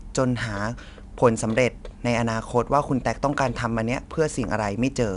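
Speech with 4-bit ADPCM compression throughout: gritty hiss that rides the loudness, gone in pauses unlike steady background noise, with nothing above 10.6 kHz, consistent with roughly 88 kbps.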